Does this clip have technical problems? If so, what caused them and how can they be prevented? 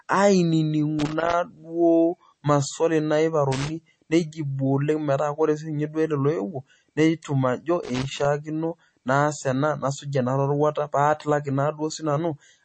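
Yes. Throughout the speech there is nothing above about 8.4 kHz, and the damage is plainly audible: a watery, swirling texture, smeared consonant onsets and metallic chirps on s sounds. This is likely MP3 compression at a low bitrate, which fits about 32 kbps. Short of bits, the encoder removed the top band and zeroed weak frequency lines that flicker on and off between frames. Encoding at 128 kbps or higher, or keeping an uncompressed master, would prevent it.

There is also loose connector crackle in three irregular bursts of scratching, from 0.99 to 1.33 s, from 3.52 to 3.69 s and from 7.83 to 8.25 s. A worn or dirty contact somewhere in the signal chain intermittently made and broke the connection, chopping the audio and adding pops from any DC on the line. Cleaning or replacing the connector and securing the cable so it cannot move would prevent it.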